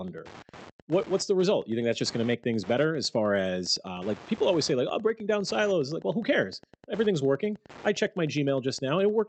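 Steady ticking, about ten per second and roughly 25 dB below the speech, runs throughout. This is Wi-Fi interference: the audio circuit is rectifying a nearby radio's 102.4 ms beacon.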